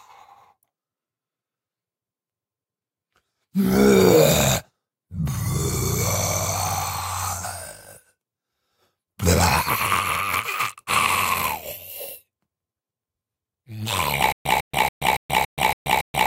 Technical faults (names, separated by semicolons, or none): stutter with silent gaps